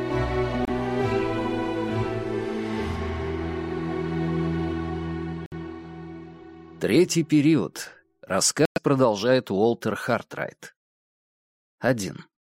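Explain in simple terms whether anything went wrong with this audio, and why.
Bluetooth stalls at 0.65, 5.46 and 8.65 seconds: the sound drops to silence for about 26, 58 and 107 milliseconds, then carries on. The likely cause is wireless interference holding up the audio packets on their way to the headphones. The small reserve of sound in the headphones runs out, so playback pauses until the delayed packets arrive and fill it again.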